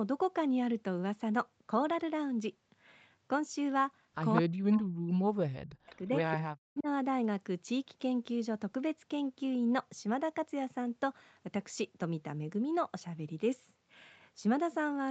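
At 4.36 to 4.41 s there is an echo leak, likely from a loudspeaker on the far end whose echo canceller let its own microphone pickup slip back. A brief copy of the speech returns about 204 ms late, only slightly quieter than the original.

From 4.42 to 6.1 s, speech is suppressed in double talk, likely because the canceller could not tell this talker from the returning echo while both sides spoke and turned everything down. The speech dips and breaks up for roughly a second and a half in total, at worst around 40 dB down.

Inside that stretch, at 5.92 to 5.96 s, a second echo leak comes through, again delayed by 204 ms but far fainter this time, well below the speech.

At 6.56 to 6.88 s the double-talk suppression returns briefly. The speech drops out in pieces again for about 0.3 s, reaching roughly 40 dB down at its deepest.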